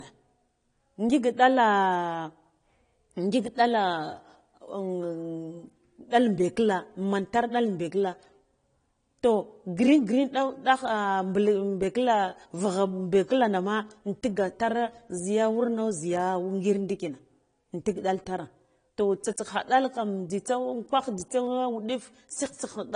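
From start to end, the speech has a hard ceiling at 10.1 kHz. Nothing sounds above it. Sibilants are dull and the air around them is missing. The band below still carries the artefacts of the first encoding. This is likely low-bitrate audio saved at a high bitrate. A low-rate encoder, which fits something like AAC at about 32 kbit/s, removed the top band and left these artefacts. The later high-rate MP3 pass kept them and could not restore what was lost.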